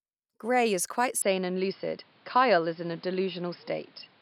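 From 1.22 s to the end the speech turns duller, with nothing above 5.2 kHz and a faint new noise floor, likely an input switched to a poorer device.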